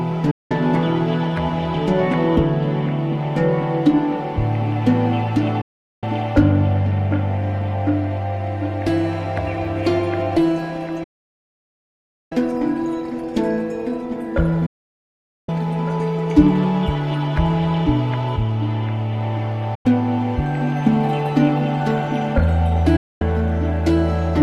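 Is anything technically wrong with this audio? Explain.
Yes, there is a digital broadcast dropout, heard six times: 0.31 to 0.51 s, 5.61 to 6.03 s, 11.03 to 12.32 s, 14.66 to 15.49 s, 19.75 to 19.86 s and 22.96 to 23.22 s. The receiver stopped getting valid frames and muted until clean data resumed, so each hole, from about 0.1 s to 1.3 s, is lost audio. The sound fades out over roughly 8 ms, leaving a flat-line gap in the waveform and a blank vertical band on a spectrogram.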